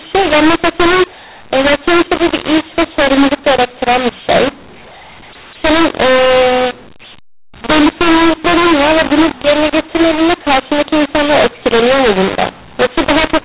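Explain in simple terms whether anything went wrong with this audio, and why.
Something did go wrong: a mu-law and A-law mix-up runs from start to finish. The telephone speech was stored using A-law but played back as mu-law. The two use different loudness scales, so levels get scrambled. The speech sounds harsh and gritty, and the pauses fill with hiss.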